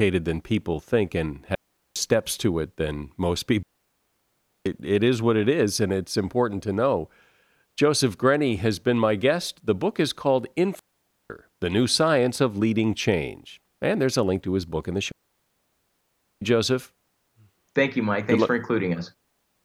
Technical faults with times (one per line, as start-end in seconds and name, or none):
1.55-1.96 digital wireless dropout
3.63-4.66 digital wireless dropout
10.79-11.30 digital wireless dropout
15.12-16.42 digital wireless dropout